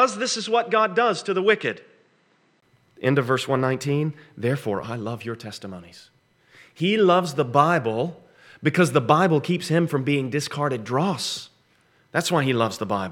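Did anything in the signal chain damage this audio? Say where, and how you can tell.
Yes: until 2.62 s, before "end of verse", the audio is dull, cut off at 9.3 kHz and quieter, with a 20 ms gap at the change. The driver's input likely switched to a poorer device.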